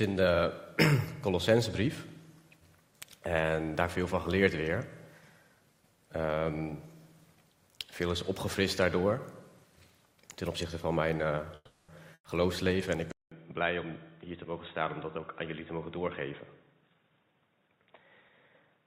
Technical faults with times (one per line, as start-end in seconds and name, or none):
11.55-11.90 call audio freeze
12.14-12.26 burst of packet loss
13.12-18.86 input switched to a poorer device
16.59-18.37 jitter buffer speed-up